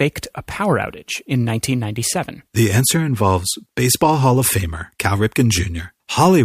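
Speech with clock slip clicks from 0.12 to 6.38 s: faint ticks roughly every 0.15 s, likely from two free-running clocks about 150 ppm apart.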